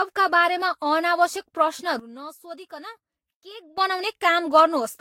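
A sudden gain jump runs from 2.00 s to 3.78 s in this speech clip. The level, background noise included, drops by about 15 dB in a single step and returns just as abruptly. That points to a digital gain change with no ramp, likely a setting or bit shift applied instantaneously. Generation loss is present throughout. The speech sounds swirly, hollow and smeared, with softened attacks and nothing above 16.6 kHz. This fits audio likely pushed through a Vorbis encoder around 58 kbit/s about four times, each pass requantising on a fresh frame grid so the noise and spectral holes accumulate.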